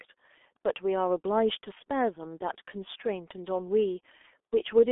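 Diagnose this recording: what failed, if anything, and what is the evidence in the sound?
The codec stage is the culprit: this speech has been through the G.723.1 codec for its whole length. Nothing comes through above about 3.6 kHz, and the band sits roughly between 300 Hz and 3.5 kHz, so everything's muffled. The hoarse, smeared quality and blurry consonants fit a very low rate, around 6.3 kbit/s. At that rate the coder models the voice in coarse 30 ms frames and can't keep up with quick changes, so the damage is heavy from start to finish.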